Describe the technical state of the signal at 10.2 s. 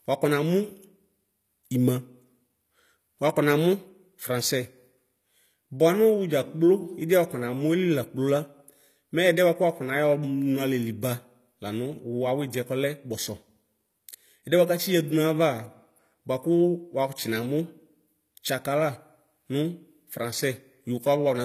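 At 10.2 s, as across the whole clip, s sounds come out gritty and lispy, with nothing above 14.9 kHz. This is likely HE-AAC compression rebuilding treble from copied lower bands, consistent with roughly 24 kbps.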